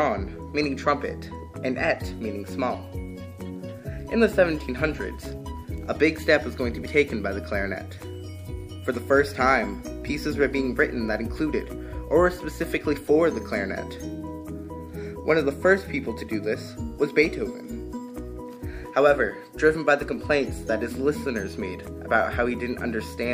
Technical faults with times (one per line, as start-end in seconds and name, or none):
none